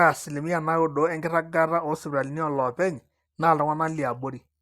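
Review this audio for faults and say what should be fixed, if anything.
Nothing stood out on listening to this speech, so there is nothing here that needs fixing.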